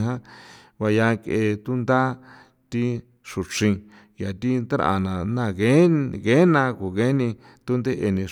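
Nothing technically wrong turns up anywhere in this short bit of speech, so there's really nothing to flag here.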